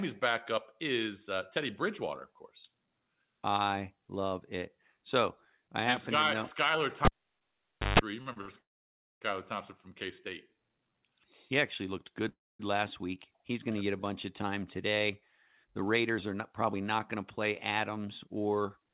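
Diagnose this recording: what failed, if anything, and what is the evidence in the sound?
Analogue wiring: a cable pulled and plugged in between 7.05 and 7.99 s. A pop opens roughly 0.89 s of near silence, then about 0.15 s of 50 Hz mains buzz while only the tip makes contact, and a second pop as the signal reconnects.

Network and jitter buffer: short stalls from late packets at 8.22, 8.33 and 8.41 s. The receiver held the last sound for 38, 34 and 71 ms until each packet arrived, then resumed in place. Nothing is lost, but each sound is briefly stretched.

Call processing: call audio freezes at 8.58 to 9.22 s and 12.29 to 12.60 s. The sound is extended and fades into silence for about 0.57 s and 0.23 s, then continues unchanged. The likely cause is packets held up in transit, which left the jitter buffer empty.

Jitter buffer: a slow-down from 10.49 to 10.90 s. The receiver repeated pitch periods, adding 58 ms to rebuild its reserve. 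The speech runs at 88% speed at the original pitch, with drawn-out sounds. This sits on a band-limited path with nothing above 4 kHz, which fits a G.711 A-law call codec.

Jitter buffer: a speed-up from 15.64 to 18.87 s. To reduce excess buffered delay, the receiver cut short pieces of pitch periods, removing around 0.3 s in total. The speech runs at 107% at unchanged pitch and sounds hurried.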